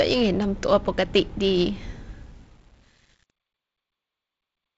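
Truncation distortion on a fade runs from 1.91 s to the end at 4.77 s, worst from 2.19 s on. The fade-out stage drops low bits without dither, which fits a 9-bit path. As the level sinks, the sound turns gritty over the band-limited G.722 audio.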